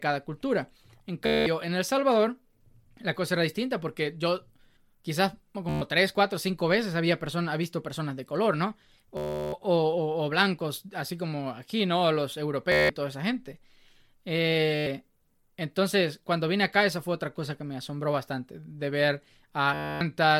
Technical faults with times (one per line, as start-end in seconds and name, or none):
1.26-1.46 Bluetooth stutter
5.69-5.82 Bluetooth stutter
9.17-9.53 Bluetooth stutter
12.72-12.90 Bluetooth stutter
14.76-14.87 Bluetooth stutter
19.74-20.01 Bluetooth stutter